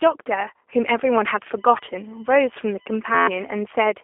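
Speech runs through the whole clip with a narrow, slightly rough and synthetic quality and nothing above 3.5 kHz, the mark of the G.729 codec rebuilding the voice from a filter model at 8 kbit/s. From 1.56 to 3.56 s a steady high whine sits roughly 30 dB below the signal, built on 1 kHz and strongest at 6 kHz. This is USB whine, with bus current leaking into the audio path. At 3.15 to 3.27 s the sound freezes into an 86 Hz buzz. This is a system hang loop, with an 11.61 ms chunk repeating as the hardware kept cycling its buffer, which fits a 512-sample buffer. Around 150 ms of audio is lost.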